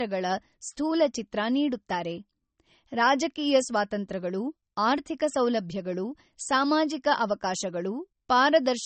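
From start to finish the speech carries low-bitrate audio saved at a high bitrate: it was most likely squeezed through a low-rate MP3 encode, around 32 kbit/s by the sound of it, and then re-saved as a larger MP3. Nothing is present above 8.4 kHz, so sibilants sound dull and the top end is missing. The coding artefacts of that first pass remain, and the later high-rate copy cannot bring back what was discarded.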